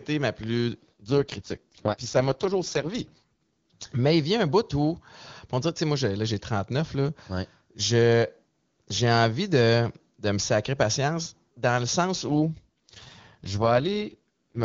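Right after "ma plus", from 1.00 to 3.24 s, and again after "patience dans le sens", from 12.28 to 14.64 s, the speech turns raspy and synthetic: an AMR rate drop, consistent with AMR-WB falling from 23.85 to 6.6 kbit/s. The bandwidth holds and nothing goes silent, which sets it apart from a fallback to narrowband or from packet loss. Only the texture coarsens until the rate recovers.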